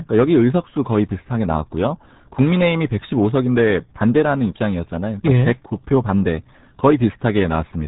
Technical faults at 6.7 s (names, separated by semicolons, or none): RealAudio 14.4 codec